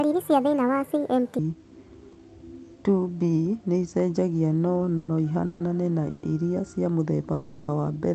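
A section at the wrong speed runs from 0.0 to 1.39 s. This opening stretch of speech plays about 1.55 times too fast, so it sounds hurried and raised by about seven semitones. Tempo and pitch move together, which points to a rate mismatch rather than pitch shifting. The likely cause is that this part was resampled or played against the wrong clock before the speed returns to normal.

Call audio freezes follow at 4.97 to 5.1 s, just after "nĩicenjagia no", then at 5.46 to 5.62 s, ending right before "na irĩa", then at 6.1 to 6.25 s and at 7.33 to 7.7 s. Each time the last sound is stretched into a decaying buzz or hiss, for about 110, 140, 130 and 350 ms. None of these fall to silence. Speech then resumes where it stopped with nothing skipped, so each one is an inserted pause that is likely the result of late-arriving call packets draining the jitter buffer.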